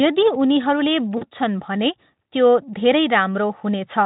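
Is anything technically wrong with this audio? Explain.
Yes. From 1.17 to 1.24 s, VoIP packet loss concealed by the speech codec: about 40 ms of packets went missing, fitting two frames, and the decoder extrapolated, briefly smearing the speech into a fading buzzy tone or coloured noise.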